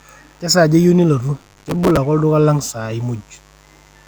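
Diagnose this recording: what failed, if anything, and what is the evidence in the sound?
Analogue wiring picked up mains buzz: a raspy 50 Hz buzz with upper harmonics runs under the speech throughout, about 35 dB below it. It points to a dimmer, rectifier or missing shield.

At the driver or buffer stage there's processor overload crackle from 1.39 to 1.97 s. The gritty tearing comes from dozens of missed deadlines replaying old audio, which fits buffers of roughly 5 ms.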